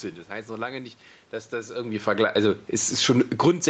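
A speech recording that passed through a call path, where the automatic gain control pumps in the last two seconds. From 1.97 s to 3.69 s there is automatic gain falling: the control judged the input too loud or its background noise too strong and eased its gain down by about 10 dB, so the voice and the room noise behind it sink together. That shared drop is what separates it from the talker moving, around 1.5 s, where only the voice changes level. Inside that slide, from 2.34 s to 2.75 s, automatic gain rising briefly lifts everything by about 4 dB, voice and background swelling as one over roughly 0.4 s before the downward trend resumes. A real change in speaking level would leave the background steady. The audio stops near 8 kHz, which fits the Opus call codec's bandwidth.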